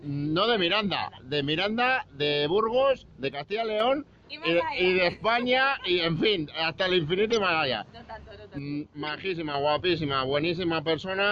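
From 3.33 to 3.80 s, and again from 8.59 to 9.54 s, the level drops abruptly by about 6 dB and then recovers. This is most likely one channel dropping out before the mono sum. Unlike a fade or gain ride, the step is instant. The sound otherwise keeps its character.

At 7.30–7.37 s a brief burst peaks around -15 dBFS, spanning about three frames. At 9.07–9.10 s a shorter blip near -20 dBFS falls within the second dropout. Both are a corrupt frame decoded: damaged data played anyway, spraying energy into the wrong frequencies. Unlike a click, each burst lasts about the length of its damaged frames.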